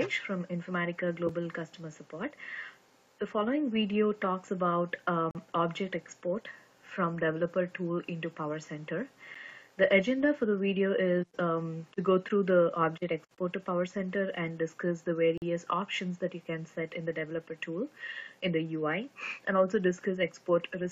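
Abrupt, hard-edged holes of silence, about 4 to 44 ms long, interrupt the sound at 1.29 s, 5.31–5.35 s, 9.34 s, 13.35–13.38 s and 15.38–15.42 s. These are gaps between stream segments: the time stamps of the 2 s segments don't meet, so the player fills each gap with silence.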